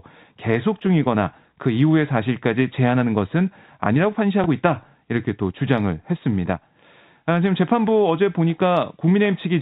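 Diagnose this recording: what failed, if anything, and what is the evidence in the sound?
The network dropped a packet. At 4.44 to 4.46 s there's a small blip where the receiver filled the gap by replaying the last packet it had, which is packet loss with the last packet repeated. The 20 ms hole fits a single lost packet. Under it you can hear the G.711 A-law phone band topping out at 4 kHz.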